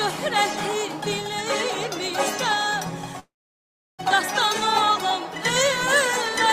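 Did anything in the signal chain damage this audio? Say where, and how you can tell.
Yes. Between 3.19 and 4.01 s there is a call audio freeze. The last sound is briefly carried on as a fading buzz or hiss, then drops to silence for about 0.69 s of the 0.79 s gap. The audio then resumes exactly where it stopped, with nothing skipped, so everything after it runs about 0.79 s late. That points to the network stage: packets were likely held up in transit, the receiver's jitter buffer ran dry, and it filled time until they arrived.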